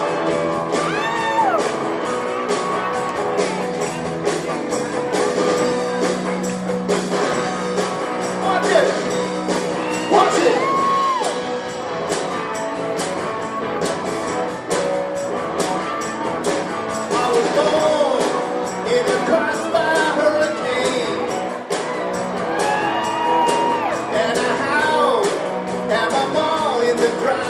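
No technical faults are audible anywhere in the recording.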